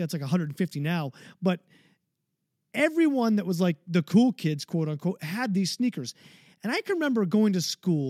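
A recording of speech, its signal carries no audible technical faults at any point.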